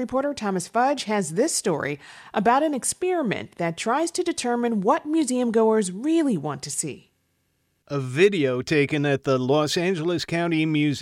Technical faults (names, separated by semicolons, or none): none